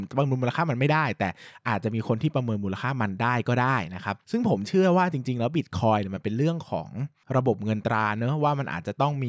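Listening through the speech recording, nothing stood out as a technical fault at any point.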